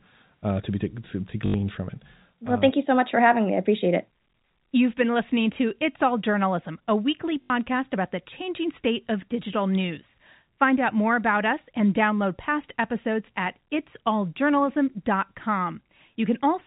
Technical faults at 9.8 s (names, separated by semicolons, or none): none